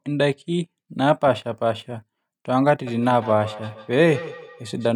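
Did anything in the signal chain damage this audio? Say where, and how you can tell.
Yes. The damage is in call processing: feedback echo between two devices from 2.87 s to the end. A second device's loudspeaker feeds the microphone, which its own echo canceller cannot remove, so speech returns about every 150 ms, thinner and ringing, peaking about 14 dB below the speech.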